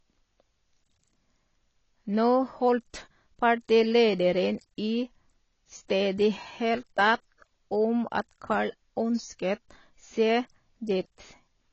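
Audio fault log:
Throughout: AAC compression, likely AAC-LC near 24 kbps; nothing above 7.9 kHz, and coarse spectral quantisation leaves speech dull, smeared and fizzy on sibilants.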